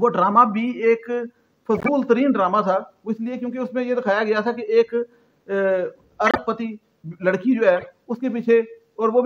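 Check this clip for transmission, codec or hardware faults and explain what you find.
Three short bursts show that corrupt frames were decoded. At 1.75 to 1.89 s, 6.26 to 6.39 s and 7.76 to 7.87 s, bit errors inside compressed frames were decoded as if valid, so misread gains and codes placed energy at wrong frequencies. Each burst lasts roughly 110 to 130 ms, pointing to a handful of consecutive frames. The sound is a harsh chirp or noise blip, close to full scale in the first two and far quieter, around -20 dBFS, in the third.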